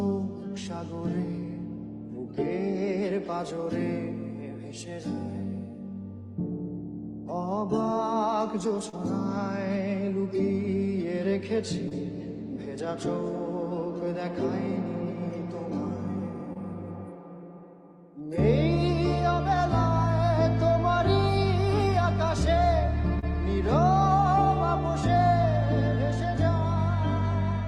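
Short concealed packet loss occurs four times: at 8.89 to 8.95 s, 11.89 to 11.93 s, 16.53 to 16.57 s and 23.19 to 23.24 s. Audio packets covering 40, 20, 20 and 40 ms never reached the decoder in time. The receiver extended the preceding sound, following its pitch or as shaped noise, then blended back. Each gap is heard as a brief smear or wobble. The call codec path, with coding noise consistent with about 40 kbps Opus, cuts off above 12 kHz.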